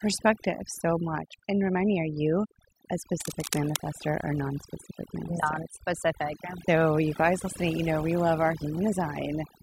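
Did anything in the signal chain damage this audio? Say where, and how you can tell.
Yes. Overdone noise removal runs through the whole clip, at the processing stage. The background sits near silence, broken by twinkling specks. A noise suppressor set too hard is gating individual frequency bands, and the soft parts of the speech go too.

Cable scratch noise appears from 3.12 to 3.77 s, right after "you a". Dense, uneven scratching and rustling sits over the speech at about 10 dB below it. This points to the analogue wiring. A worn cable or connector was likely moved, and its contact resistance fluctuated rapidly.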